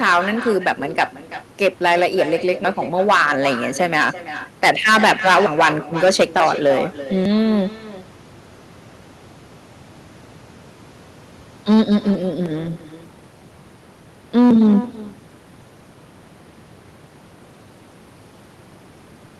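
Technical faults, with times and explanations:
Throughout, echo with no canceller: the far end's loudspeaker is feeding back into its microphone and nothing strips it out, so every phrase returns roughly a third of a second later as a copy about 13 dB quieter and thinner than the original speech.
0.02–1.04 s, 1.62–4.09 s, 4.63–5.68 s, 6.03–6.72 s, 11.69–12.11 s and 14.37–14.77 s, hard clipping: a stage in the chain is driven beyond its limit, by about 16 dB at worst around 4.6–5.7 s and only about 4–5 dB in the last two runs, so peaks are sliced flat, adding harsh upper harmonics heard as fuzz and crackle.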